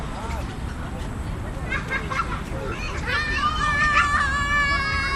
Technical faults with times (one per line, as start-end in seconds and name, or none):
2.70-2.88 lost LE Audio frames